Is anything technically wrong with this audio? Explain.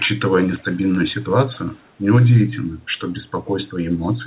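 Yes. From 0.28 to 0.64 s there is an echo leak: a very faint copy of the speech trails the original by about 163 ms. The likely cause is a far-end loudspeaker whose echo canceller failed to remove everything its microphone picked up, so the remainder was sent back down the call. Unlike room reverberation, which smears into a smooth decaying tail, this is a distinct, separate repeat at a fixed delay, heard briefly beneath the narrowband call audio.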